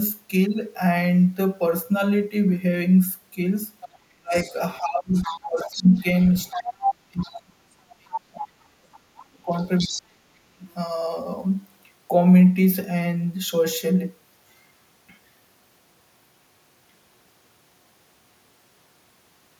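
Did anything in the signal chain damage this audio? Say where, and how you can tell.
Yes. At the call-processing stage there is other side's voice leaking through: a second, fainter voice sits under the talker from 3.81 to 7.96 s at about 15 dB below the main speech, and again from 9.57 to 10.02 s at about 10 dB below. The likely cause is an echo canceller leaving part of the loudspeaker signal in the microphone feed. Analogue crosstalk would be steady, but this leak comes and goes in two separate stretches.

Also in call processing, speech is suppressed in double talk between 4.15 and 10.65 s. The talker's level sinks, at worst by around 40 dB, for roughly four seconds in total. The likely mechanism is an echo canceller that cannot separate near speech from echo while both are active, so it turns both down. Network dropouts would cut out regardless of the far side.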